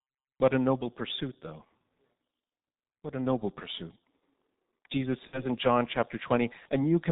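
From the start, the speech passes through the G.723.1 codec at 6.3 kbit/s, and the damage is heavy. With 30 ms frames and a slowly updated voice model, the sound is muffled and hoarse, with smeared consonants. A spectrogram shows nothing above 4 kHz and blurred, blocky formant detail.

From 5.27 to 5.42 s comes VoIP packet loss concealed by the speech codec. About 60 ms of data is missing, which fits two lost 30 ms frames. The decoder repeats its last pitch and filter at falling gain, so the sound becomes a fading buzzy tone or coloured noise. Recovery stays weak afterward. The waveform shows a decaying patch.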